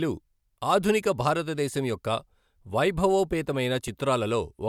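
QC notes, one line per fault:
No fault to note for QC.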